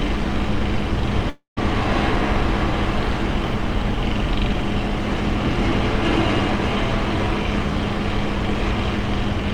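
From 1.29 to 1.59 s, a likely long network dropout loses audio; a fading buzz gives way to silence, seen as smeared decaying bands, then a blank gap.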